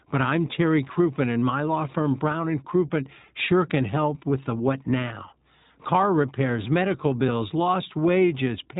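Speech runs through an iLBC codec for the whole clip. Nothing above 3.8 kHz survives, so sibilants lose their edge and the sound takes on a telephone-like thinness, and the coding roughness is plainly audible as a slightly synthetic, grainy texture. That roughness separates it from a simple low-pass filter, which narrows the band but keeps the sound smooth. The graininess, which fits 20 ms frames at 15.2 kbps, comes from each frame's excitation being coded on its own.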